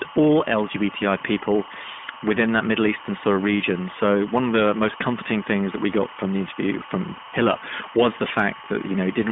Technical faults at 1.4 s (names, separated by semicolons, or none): timecode bleed; iLBC codec